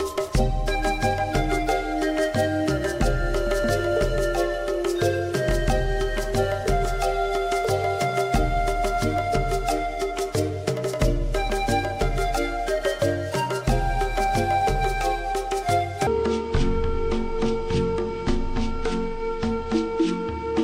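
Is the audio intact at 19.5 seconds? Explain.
No. At 19.5 s the audio sits inside a section at the wrong speed, running from 16.07 s to the end. It plays at 0.579 times its true rate, likely from a clock mismatch. Pitch drops roughly ten semitones, so everything sounds deep and slowed.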